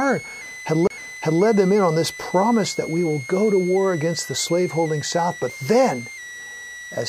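A thin, steady whistle sits under the speech from start to finish, centred near 2 kHz and wandering between about 1.94 and 2.19 kHz, roughly 15 dB below the speech level. This is switching supply whistle: a switching power supply in the playback or recording chain is cycling at an audible rate, and its tone leaks into the audio path as a high, shifting pitch.

At 0.87 to 0.90 s a short dropout of about 30 ms breaks the speech, and it resumes abruptly at "them in on this." This is a CD skip. A knock or a flaw on the disc threw the laser onto another turn of the spiral, so the player muted briefly and continued from a different point on the disc.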